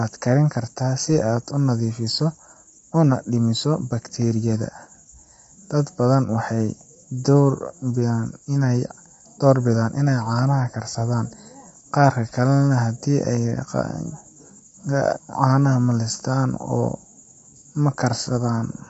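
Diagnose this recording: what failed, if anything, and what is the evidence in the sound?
The codec stage failed, most likely through low-delay AAC compression of the AAC-ELD kind. Throughout the speech, the voice sounds rough and grainy. Noise fills the gaps between harmonics. Nothing is heard above 7.8 kHz. The short frames starve the harmonics of detail, which fits a bitrate near 24 kbps.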